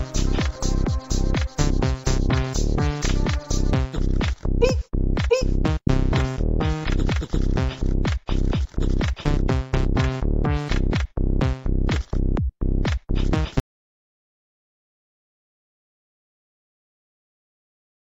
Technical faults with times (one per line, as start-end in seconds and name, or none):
13.60-18.00 audio dropout to silence